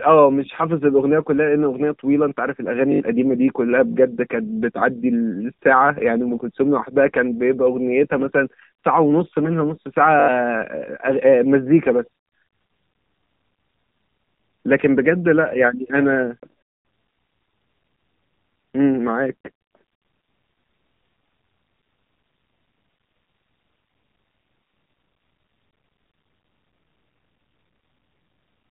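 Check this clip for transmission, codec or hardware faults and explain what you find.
There's one fault, and it runs the whole way through: AMR narrowband mobile codec. The speech is squeezed into a 4 kHz band and rebuilt from a vocal-tract model plus sparse pulses, so it comes out plainly buzzy and synthetic, which fits a low rate around 7.4 kbps.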